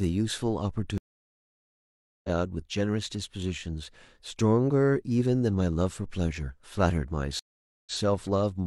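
At 0.98 s a stream reconnect drops the speech for 1.26 s; the restarted decoder resumes about 1.5 s further on, skipping material. A second reconnect at 7.39 s silences 0.47 s, then replays the last 93 ms.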